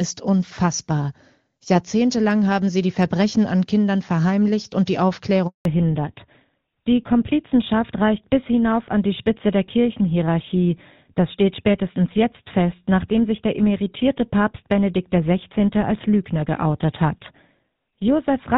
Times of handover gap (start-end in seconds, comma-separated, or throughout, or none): 5.47-5.65